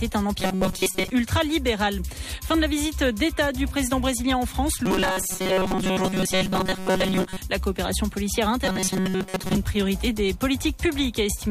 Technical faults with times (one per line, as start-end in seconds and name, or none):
0.40-1.11 robotic sound from repeated short buffers
4.86-7.37 robotic sound from repeated short buffers
8.65-9.57 robotic sound from repeated short buffers